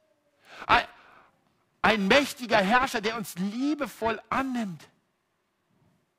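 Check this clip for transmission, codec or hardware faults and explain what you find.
There's one hardware fault running the whole way through: periodic clock jitter. The converter clock wobbles at around 1 kHz, smearing sidebands onto the speech, so it sounds gritty and metallic, especially up top.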